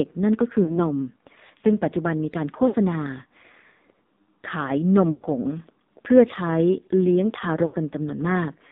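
From the start, the whole clip runs through the AMR narrowband mobile codec, and it's hit hard. The speech sits in a narrow line band from about 200 Hz up to 3.7 kHz, with nothing above that. It has the buzzy, synthetic quality of a low-rate vocal tract model, which fits one of AMR-NB's lowest modes, around 5.9 kbps. There are so few pulses per subframe that the voice sounds thin and processed throughout.

On top of that there are four spots with lost AMR speech frames. The first runs from 0.64 to 0.79 s, then 2.68 to 2.76 s, 5.12 to 5.25 s, and 7.66 to 7.76 s. In each one, frames that failed their check were replaced by the decoder repeating the last good pitch and spectral settings at falling gain. You hear the sound smear into a warbly, stretched tone and sag in level. The gaps work out to roughly 40, 60, 100 and 80 ms of missing audio. The longest is at 5.12 s, and the speech comes back rough for a moment afterwards.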